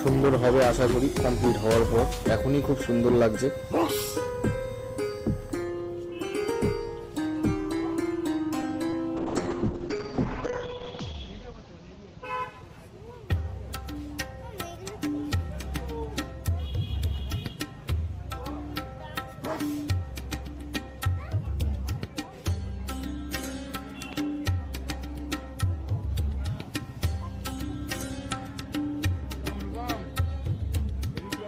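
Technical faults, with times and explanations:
8.90–8.94 s, short concealed packet loss: About 20 ms of audio never arrived in time. The receiver filled the gap by extending the preceding sound, then blended back into the real signal. This leaves a brief smear or wobble, and a short sound may drop out.
9.18–12.79 s, call bitrate drop: The encoder's rate fell from 32 kbps to 7 kbps and stayed at its lowest for about 1.55 s. Coarser coding makes the sound rough and watery. The audio bandwidth shrinks from 20 kHz to 8 kHz, so the highs go dull and muffled until the rate recovers.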